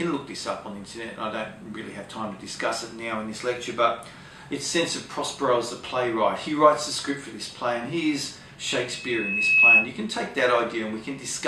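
A piercing 2.6 kHz tone swells over most of a second from 8.93 to 9.91 s, ending some 15 dB above the audio: loudspeaker feedback squeal, where the microphone re-amplifies its own loudspeaker until the loop runs away.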